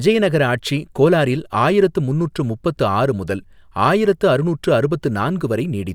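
No technical faults are audible in the recording.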